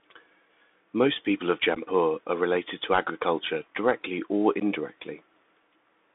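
Throughout, the speech carries plainly audible Bluetooth CVSD headset codec damage. The band runs only from about 250 Hz to 3.6 kHz. The one-bit delta coder's adapting step cannot keep up with loud, fast changes, so sibilants turn scratchy and a granular hiss sits under the voice.

At 1.75 s and again at 4.60 s, unconcealed Bluetooth headset packet loss drops a few voice packets, about 15 ms and 11 ms of audio. Nothing fills the gaps, so each is a hard-edged hole, and the speech resumes briefly quieter as the CVSD decoder recovers.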